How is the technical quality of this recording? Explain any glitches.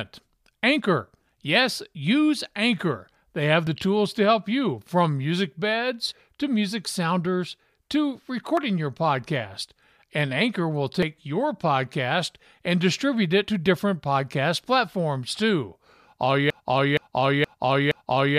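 The recording has two clear technical problems: three brief dropouts where audio goes missing between chunks, and a broken-record loop that takes over the final seconds.

The dropouts fall at 3.67 s, just before "the tools to help"; at 8.57 s, between "to music sounders to" and "your podcast"; and at 11.03 s, just before "your podcast and distribute". Each removes roughly 50 ms, and the surrounding audio closes up with no silence, so the speech jumps forward abruptly. The likely cause is a recorder or processor handling audio in blocks and dropping a sliver at each handover, with the spacing fitting 2.5 s chunk boundaries. A waveform shows a sudden discontinuity at each point, and a spectrogram shows harmonics that shift or break without transition.

The broken-record loop starts at 16.50 s and continues to the end. A 0.47 s fragment repeats exactly, back to back, four times, and the speech that should have followed is lost. 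This likely comes from a player, encoder or stream stalling and resending the last buffer it held. A waveform shows the same shape tiled end to end, and a spectrogram shows identical patterns stamped side by side, often with a visible seam at each repeat.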